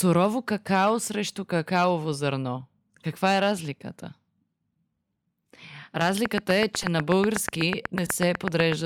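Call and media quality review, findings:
Corrupt frame decoded at 3.39 s, 6.81–6.86 s and 8.05–8.10 s. Short chirp-like blips from bit-damaged compressed frames played anyway. Misread codes misplace spectral energy, each burst spanning a few frames.

Train of clicks, 6.26–8.73 s. Regular ticking at about 8.1 per second, roughly twenty clicks, standing well above the speech. Likely interference pickup or a faulty connection or power supply.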